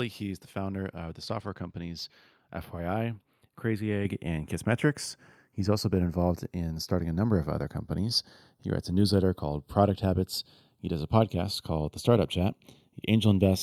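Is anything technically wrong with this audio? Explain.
Yes. Throughout this speech clip the channels are drifting apart: two separately clocked devices disagree by roughly 20 ppm, so the inter-channel delay creeps toward about 0.3 ms. Summed to mono, comb notches sweep slowly, heard as slow flanging; a spectrogram shows slanted notch bands.

At 4.05 s the microphone volume is stepped up by about 7 dB in a single jump, as automatic gain control raises the input device level. Voice and background rise together, and the waveform envelope visibly steps up at that instant.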